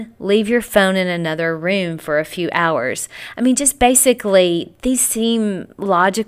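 No technical faults are audible.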